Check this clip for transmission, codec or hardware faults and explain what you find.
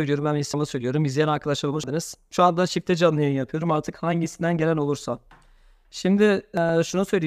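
Two kinds of fault are present in the speech: three places where compressed frames were skipped, and one corrupt FLAC frame.

Compressed frames skipped at 0.54 s, 1.74 to 1.84 s and 6.57 to 6.76 s: whole frames never reach the output, so the sound jumps ahead by about a fifth of a second at the first two and about a tenth at the last. On a spectrogram, the harmonic contours break and restart abruptly.

Corrupt FLAC frame at 5.17 s: flipped bits went unchecked, so the predictor decoded wrong values from the damaged bit on. The result is a brief error peaking around -39 dBFS. On the waveform it shows as a jagged spike, and on the spectrogram as a thin broadband vertical stripe.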